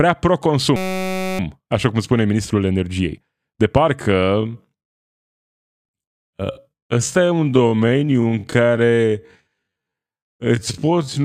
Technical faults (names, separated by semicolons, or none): system hang loop; time-stretched section